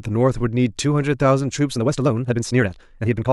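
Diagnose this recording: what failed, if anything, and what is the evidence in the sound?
From 1.71 s to the end at 3.32 s, the speech abruptly runs 1.83 times faster with no rise in pitch, sounding rushed. That's a time-stretched section. Likely an editing or playback stage squeezed it to fit, dropping short slices to hold pitch.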